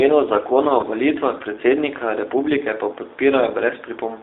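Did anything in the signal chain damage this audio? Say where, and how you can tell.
Yes, at the codec stage. The speech runs through the G.729 codec at 8 kbit/s for the whole clip. Nothing sits outside a 300 Hz to 3.7 kHz line band. The sound is plainly rough and synthetic, rebuilt from a filter, pitch predictor and sparse pulses.

The network stage adds VoIP packet loss concealed by the speech codec, from 0.81 to 0.85 s. It falls after "zakona o" and before "volitvah predsednika republike pa". About 20 ms is missing, which fits two 10 ms frames. The decoder stretches its last pitch and filter into a fading buzz or coloured noise, and the sound stays weak briefly afterwards.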